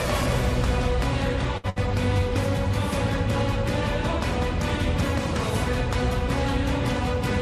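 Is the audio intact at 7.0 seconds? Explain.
Yes, the audio is intact at 7.0 seconds, with no dropout, click, distortion or other fault at that point.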